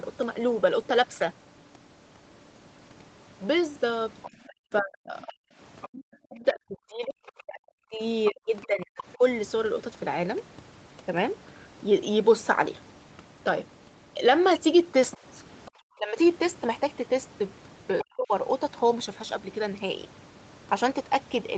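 From 4.22 to 5.88 s a second, fainter voice sits under the talker, about 20 dB down. It is the other side's voice leaking through, most likely because the far end played on a loudspeaker and the echo canceller left part of it in the microphone signal. The same residue returns from 7.27 to 9.03 s, somewhat louder at about 15 dB below the talker, then briefly from 15.11 to 15.7 s and for a short scrap from 17.99 to 18.04 s. This fault adds a separate voice to the mix. The talker's own level is not what changes.

The other fault takes away from the talker. Speech suppressed in double talk begins at 4.28 s and runs to 9.22 s, overlapping both long leaks. Across roughly three seconds of that span the talker's voice sinks, at its deepest by around 40 dB, so parts of it nearly vanish. The likely cause is that the canceller could not separate near-end speech from the echo while both sides spoke, and it turned everything down. 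Shorter dips follow from 15.97 to 16.17 s, about 20 dB deep, and from 18.02 to 18.32 s, about 35 dB deep, overlapping the end of the last leak. All of this sits within a call band that stops at 8 kHz.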